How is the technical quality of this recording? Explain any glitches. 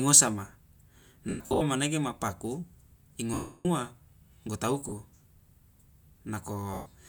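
The recording has four dropouts from lost LE Audio frames, at 1.29–1.62 s (gaps totalling 230 ms, the longest about a tenth of a second), 3.34–3.66 s, 4.89–4.92 s and 6.74–6.86 s. The LC3 decoder fills each gap by replaying the last spectrum with random signs and then fading it. Speech becomes a brief noisy smear, and the longer losses sink toward silence.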